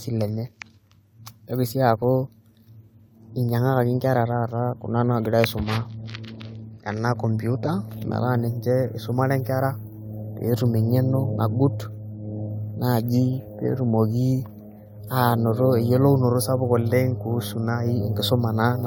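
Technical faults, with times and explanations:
No technical faults can be heard in this recording.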